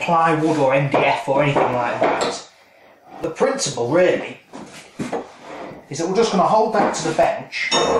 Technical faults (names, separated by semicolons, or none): periodic USB or driver dropouts